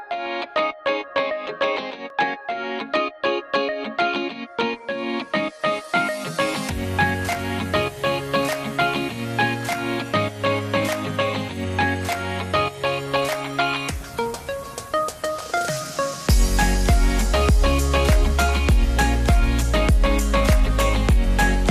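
From start to finish the audio carries MP2 compression damage, plainly audible throughout. It sounds dull, with a gurgling, granular roughness. The cause is likely an MPEG Layer II encode at a low rate, around 80 kbps: with bits scarce, upper sub-bands are dropped and the remaining ones coarsely quantised. On a spectrogram the top end is cut off and patchy, with bands blinking on and off. The waveform shows little.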